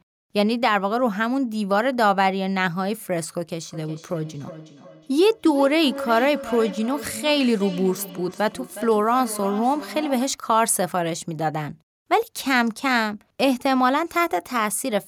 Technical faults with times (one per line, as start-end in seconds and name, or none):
3.60-10.49 feedback echo between two devices